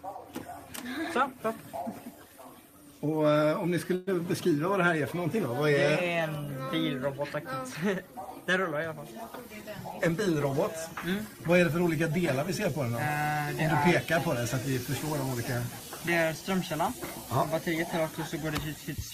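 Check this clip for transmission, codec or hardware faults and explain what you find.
Two transmission faults are audible, both at the receiving end of a call.

From 3.95 to 4.09 s there is a call audio freeze: the last sound is held for about 115 ms and fades without dropping to silence, and the audio then resumes where it stopped with nothing missing. The likely cause is delayed packets emptying the jitter buffer, which adds 115 ms of delay.

From 10.03 to 10.74 s a jitter buffer speed-up runs the audio at 105% with unchanged pitch, so it sounds slightly hurried. The receiver trims short pitch-period slices, around 40 ms in total, to work off the surplus buffered delay.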